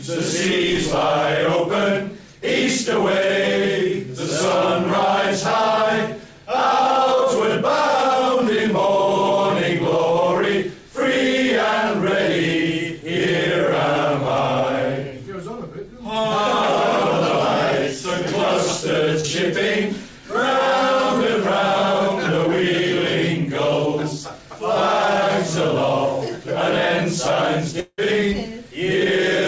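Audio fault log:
19.20 to 19.26 s, short concealed packet loss: roughly 40 ms of audio failed to reach the decoder in time, and the receiver covered the gap by extending the preceding sound, using its pitch if voiced and shaped noise if not, before crossfading back into the received signal. The result is a brief smear or wobble in audio that, through this G.722 call path, carries nothing above 8 kHz.
27.80 to 28.00 s, long network dropout: about 180 ms of audio is missing. The decoder first continues the last sound as a buzz or hiss that fades away, then leaves about 50 ms of silence before the signal returns further along with no catch-up, so the missing section is simply skipped. The likely cause is a stall in packet delivery long enough to exhaust the receiver's concealment.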